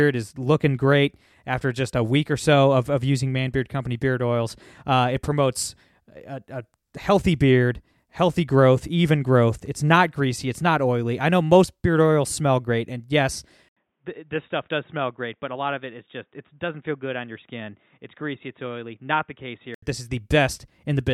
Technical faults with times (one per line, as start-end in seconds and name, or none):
13.69-19.82 input switched to a poorer device